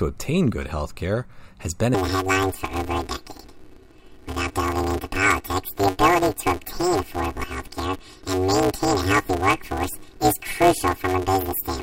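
From 1.94 s, after "good healthcare has been", planar audio is read as interleaved. Blocks of 5.33 ms replay in halves, leaving a robotic 188 Hz buzz to the end.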